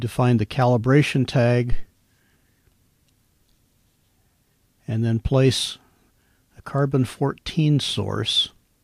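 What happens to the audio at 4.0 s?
Nothing goes wrong at 4.0 s; the audio plays through that moment intact.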